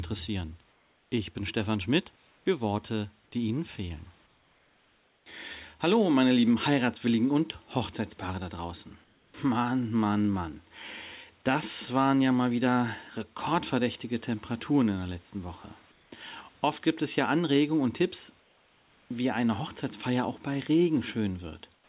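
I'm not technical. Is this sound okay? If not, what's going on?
No. In several pauses between words, the faint room sound in the background turns into a flat, even hiss that is a little quieter and has no detail: at 0.72 to 1.12 s, 2.16 to 2.46 s, 9.04 to 9.34 s (right after "da draußen"), 15.92 to 16.12 s, 18.4 to 19.1 s (just before "wie eine"), and 21.74 to 21.88 s, where the drop in level is most noticeable. This is comfort noise in place of the background. The likely cause is that the sending side stopped transmitting when it heard no speech, and the receiving side filled each gap with made-up noise meant to roughly match the room.

At 9.32 s, straight after "da draußen", the next word starts abruptly, as if its first tiny moment were missing. This is an onset clipped by the voice detector, which was likely slow to notice that speech had resumed, so the opening sliver was never sent and filler noise played instead. 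Across the whole clip the call connection also removes everything above 4 kHz, which takes some brightness out of the sound.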